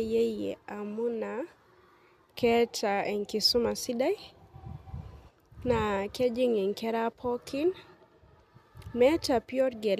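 No technical faults are audible anywhere in the recording.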